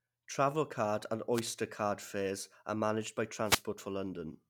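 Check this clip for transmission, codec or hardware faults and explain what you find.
Two wireless microphone noise hits break into the speech, from 1.33 to 1.41 s and from 3.44 to 3.64 s. Each is a brief swish of static. The FM radio link fades as reflected signals cancel. Receiver noise then rises over the voice.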